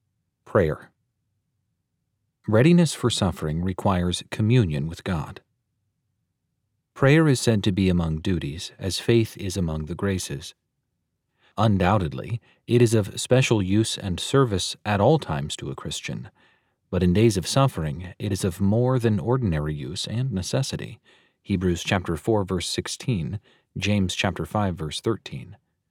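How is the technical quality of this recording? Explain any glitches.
No technical glitches are audible.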